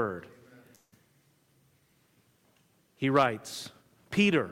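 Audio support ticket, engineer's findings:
Long network dropout, 0.75–0.94 s. Likely cause: packet stream interrupted upstream, receiver starved. Concealment extends last audio as a fading buzz/hiss for about 166 ms, then about 20 ms of near-silence before the stream resumes. Roughly 160 ms of original audio lost, not recovered; playback picks up further on with a gap in continuity. Check network path jitter/loss at that timestamp.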